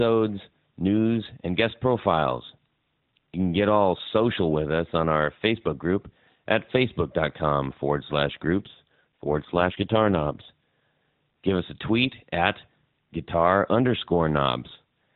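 From 8.58 to 10.50 s, just after "forward slash", an AMR rate drop makes the speech rougher and more synthetic, which fits a step down from 12.2 to 5.9 kbps. Unlike packet loss, nothing drops out, and the AMR-NB band stays below 4 kHz.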